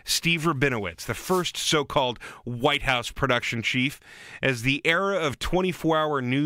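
At 1.20 to 1.46 s, just before "so called", and again at 3.90 to 3.95 s, the speech is hit by a wireless microphone noise hit. The analogue FM radio link fades as reflected signals cancel, and receiver hiss surges up. The longer first hit is a quarter-second swish of static, and the second is a brief burst. A digital dropout would leave a silent gap, but here noise swells over the speech instead.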